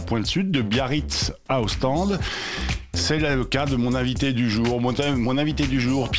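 No technical faults are audible.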